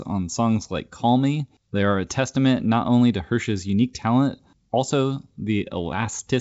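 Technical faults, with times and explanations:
Nothing stood out on listening to this speech, which carries the band-limited character of G.722 wideband telephone coding, with no content above about 7.7 kHz.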